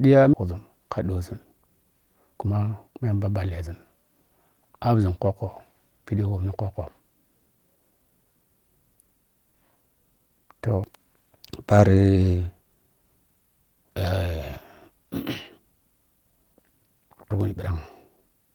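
At 0.33 s the speech skips ahead: roughly 0.7 s of audio was discarded while later audio was already queued, and playback jumps straight to it with no gap or fill, the two sides joined almost directly.

A jitter buffer speed-up follows from 0.43 to 1.68 s, running about 6% fast, then from 2.16 to 3.89 s at about 13%. The receiver trimmed short pitch-period slices, roughly a tenth and then a fifth of a second in total, to drain excess delay, so speech sounds hurried at unchanged pitch.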